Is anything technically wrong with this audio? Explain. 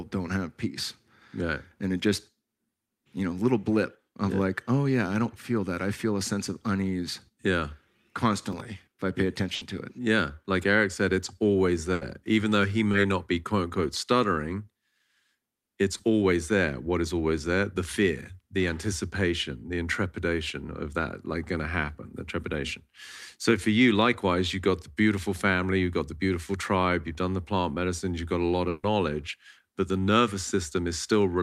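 Yes. There are three kinds of fault.

From 8.44 to 8.65 s there is processor overload crackle. The processor missed a handful of buffer deadlines in a row, which fits buffers of around 5 ms. Each miss replayed a scrap of old audio with hard edges. Together they make a short, gritty tearing over the speech, and it stops once the load eases.

There is a burst of packet loss three times. At 9.55 to 9.63 s, 60 ms is lost. At 11.93 to 12.03 s, 80 ms is lost. At 28.69 to 28.85 s, 140 ms is lost. Each time the receiver stretched the last sound and faded it across the gap, so a held buzz or hiss replaces the real audio. The speech then resumes further on, with that stretch gone.

There is short concealed packet loss at 12.91 to 12.95 s and at 15.97 to 16.01 s, each about 20 ms. The receiver patched each small hole by continuing the preceding sound and then blending back into the real signal. It is heard as a brief smear or wobble, and a short consonant can drop out.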